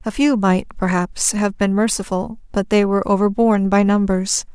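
No technical faults can be heard anywhere in the speech. Nothing in the recording calls for a time mark.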